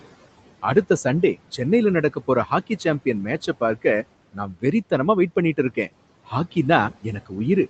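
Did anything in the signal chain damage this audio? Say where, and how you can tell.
Yes, the call processing stage damaged it. Noise suppressor artifacts run throughout: the room noise is pulled down by about 18 dB between phrases and comes back up under the speech, so the background pumps in step with the talking. Room noise on its own stays at a steady level and would not gate with pauses like this.

The same stage also caused speech cut by the noise suppressor between 4.33 and 4.64 s, just before "வெறித்தனமா வெயிட்". Roughly 150 ms of speech was treated as noise and turned down by up to about 18 dB, so it sounds swallowed. It is turned down rather than dropped to silence, which sets it apart from a packet-loss dropout.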